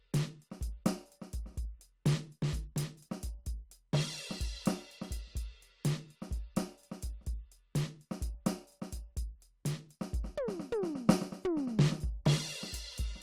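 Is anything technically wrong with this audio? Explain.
No, nothing technically wrong can be heard anywhere in this music recording.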